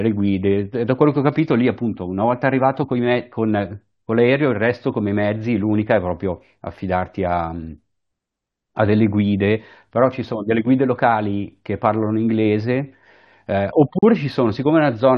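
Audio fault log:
13.99 to 14.03 s, gap at a join of encoded pieces: the speech drops out for about 41 ms and then resumes exactly where it left off. Two separately encoded segments appear to have been joined without removing the encoder's leading delay and trailing frame padding, leaving a short hole of silence. On a waveform this is a flat stretch with smeared edges. On a spectrogram it is a narrow vertical blank band, its borders slightly blurred by the codec.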